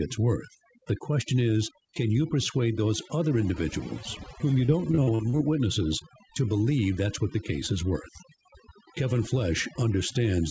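A speech clip with overdone noise removal throughout. Background noise is pushed to near silence with twinkling specks, and quiet parts of the voice are removed along with it. From 4.66 to 5.41 s, between "other individuals whom you" and "witnesses to believe that's", repeated packet loss makes the voice choppy and robotic. Short holes up to 41 ms are patched by stretching the previous sound, covering about a quarter of that span. Nothing is heard above 8 kHz, which fits a wideband call codec such as G.722.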